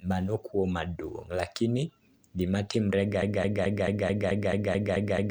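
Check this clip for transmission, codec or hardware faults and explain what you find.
One fault is present, a broken-record loop from 3.22 s to the end. The same 0.22 s fragment of speech repeats exactly, back to back, about ten times. The cause is likely a stalled player or stream resending its last buffer. Unlike an echo, the repeats never decay, and the speech that should follow is lost.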